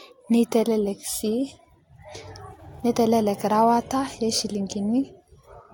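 No technical faults can be heard in this speech, so there is nothing to place in time order.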